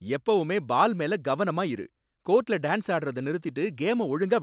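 No technical faults can be heard in the speech at any point. It has come through a call path, with nothing above 4 kHz, and that narrow telephone band fits G.711 mu-law coding at 64 kbps.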